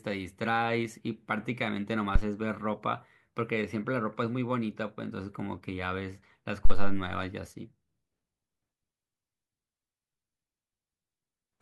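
A phantom power thump lands at 2.16 to 2.23 s and again at 6.65 to 7.08 s in this speech recording. Each time, a supply switching on or off on a live input sends a sudden voltage step through the coupling capacitors, and it comes out as a deep, low thump peaking around -9 dBFS. The first dies away quickly, within about 18 ms, while the second rings on longer, decaying over roughly 96 ms.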